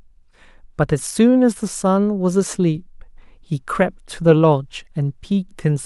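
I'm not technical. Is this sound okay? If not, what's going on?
Yes, there's nothing wrong with this recording, so you can relax.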